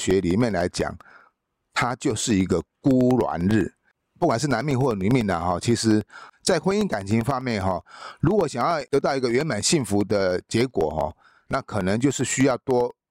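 From 0.11 to 13.0 s, periodic USB or driver dropouts blank roughly a millisecond of audio every 0.1 s, producing regular ticks through the speech.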